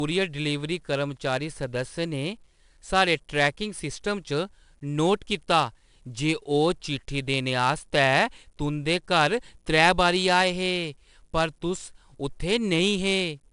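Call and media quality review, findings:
4-bit ADPCM compression throughout: gritty hiss riding every loud speech stretch, nothing above 10.7 kHz, fits an 89 kbps stream. Coarse 4-bit steps leave noise tracking level.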